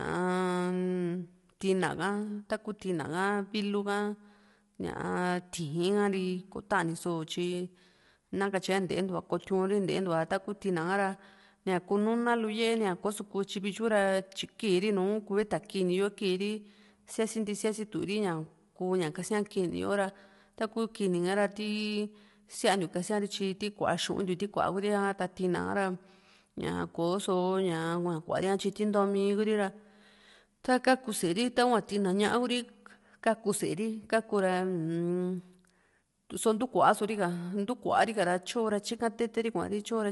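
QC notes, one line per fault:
Throughout, low-delay AAC compression: the speech is plainly rough and grainy, with noise filling the gaps between harmonics and nothing above 11.6 kHz. Very short frames resolve pitch poorly, most likely from AAC-ELD, and the damage fits a bitrate near 32 kbps.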